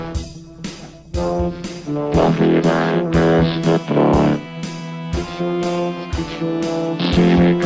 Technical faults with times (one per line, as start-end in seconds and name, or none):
none